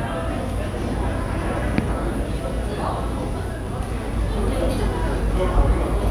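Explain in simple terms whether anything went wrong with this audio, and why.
A steady, raspy buzz sits underneath the sound from the very start to the very end, quieter than the main sound but never letting up. This is mains buzz. Electricity in the wall alternates 60 times a second, and a dimmer, rectifier or poorly shielded cable turned that into sharp spikes twice per cycle, which leaked into the recording. Those spikes carry a whole ladder of tones built on 60 Hz, reaching well into the kilohertz range, which gives the buzz its harsh edge.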